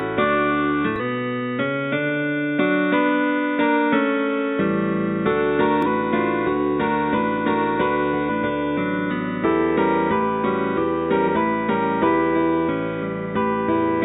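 Damaged data in the compressed stream breaks playback three times: from 0.96 to 1.00 s, from 5.82 to 5.87 s, and from 8.26 to 8.30 s. Each time, a stretch of the encoded bytes is corrupt, so the decoder cannot interpret those frames, loses its place in the stream and has to resynchronise on the next valid frame header. Each event is a brief, roughly 44 ms chirp, squawk, click or short hole that cuts abruptly through the sound before normal decoding resumes.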